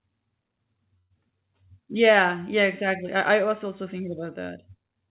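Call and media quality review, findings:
Call audio freeze, 0.98–1.12 s: speech stalls, last sound stretched into fading buzz for 0.12 s, then resumes intact. Likely jitter buffer underrun. Spectrogram shows smeared flat band; waveform a decaying repeated cycle.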